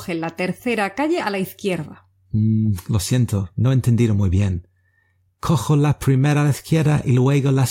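Nothing is technically wrong with this clip.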